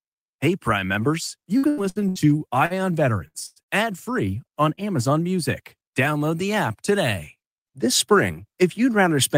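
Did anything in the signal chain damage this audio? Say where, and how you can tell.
Yes, the damage is in the network and jitter buffer stage.

From 1.57 to 2.73 s, just after "members you", repeated packet loss (robotic sound) leaves seven gaps, the longest 81 ms, concealed by extrapolation into choppy speech.

Between 2.39 and 2.93 s, a jitter buffer slow-down repeats pitch periods, adding 46 ms and playing at 93% speed, so the speech drags at unchanged pitch.

Two bursts of packet loss, at 3.28 to 3.37 s and 3.62 to 3.70 s, each drop about 60 ms. The held, fading fill is followed by a jump forward.

From 3.46 to 3.59 s, just before "ad free on", a short stall from a late packet holds the last sound for 98 ms. Nothing is lost, but the sound is audibly stretched.

At 4.75 to 4.80 s, after "ad free on", short concealed packet loss removes 60 ms behind a brief smear while the buffer trims its delay by around 40 ms.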